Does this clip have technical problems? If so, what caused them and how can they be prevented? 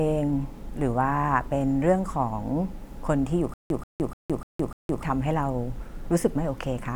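Yes. From 3.54 to 5.03 s the speech catches on a stutter with silent gaps: a short fragment of about 133 ms plays, drops into dead digital silence for about 164 ms, then comes back identical, repeating five times at an even 298 ms pace before normal playback resumes. The likely cause is a stalled player or stream replaying its last buffered fragment on each retry and then running empty, so the audio due in that stretch is lost. Larger playback buffers and steadier network delivery would prevent it.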